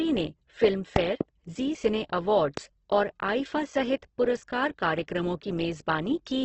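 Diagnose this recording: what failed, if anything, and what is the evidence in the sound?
The codec stage is the likely culprit for the audio's constant coarseness. The speech sounds grainy and rough rather than swirly, and the spectrogram shows a hard ceiling with nothing above 8.1 kHz. The bands below that edge look filled in with noisy texture instead of showing clean harmonic lines. This points to heavy Opus compression in its music (CELT) mode at wideband. Band energies are kept but the detail is noise-filled, which fits a starved rate of around 12 kbps.

The other fault is a loud pop, most likely from an electrical transient upstream in the analogue wiring or a switch. A double pop sits between 0.96 and 1.23 s, just before "ज़ी सिने", peaking about 20 dB above the speech. A single pop follows at 2.57 to 2.60 s, right after "ज़ी सिने", at about 15 dB. On the waveform these show as narrow spikes, and the speech continues underneath. 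On the spectrogram they are vertical broadband stripes.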